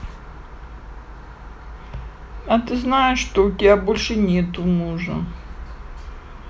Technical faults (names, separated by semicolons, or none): none